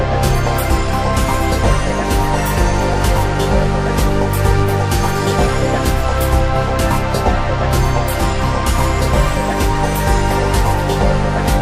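Audible MP2 compression runs through the whole sound, likely from Layer II coding at a low rate, which fits around 80 kbps. With too few bits, upper sub-bands drop out and flicker, leaving a dull, gurgling graininess. On a spectrogram this shows as a ragged ceiling with patchy, blocky high-frequency bands. At 0.46 s a brief DAB burbling appears where transmission bit errors corrupted the coded data, which fits a couple of frames hit at a low error rate of about a tenth of a percent. On a spectrogram, isolated sub-band blocks flash bright.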